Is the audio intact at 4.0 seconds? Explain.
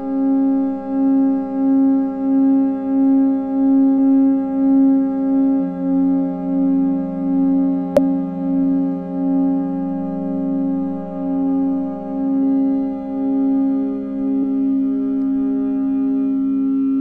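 No. At about 3.97 s there is damaged data in a compressed stream: corrupted bytes make the decoder misread a frame and hunt for the next header, leaving a brief glitch.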